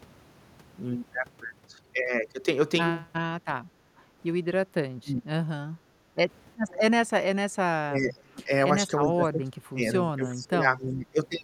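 At 4.01 to 4.17 s the background drops by about 10 dB. This is background gated by the echo canceller, which clamped the microphone while the loudspeaker played. From 4.91 to 5.4 s the talker dips sharply, likely speech suppressed in double talk. The canceller cut the talker along with the loudspeaker echo. At 5.78 to 6.17 s the room sound gates again, by about 12 dB. From 6.68 to 6.78 s a faint copy of the voice returns 380 ms late, well below the speech. This is likely an echo leak, where loudspeaker sound slipped past the canceller. The talker then fades and dips during 7.74 to 8.51 s, 8.78 to 9.82 s and 10.16 to 11.19 s. These are likely further double-talk suppression. The cuts grow shallower with each one.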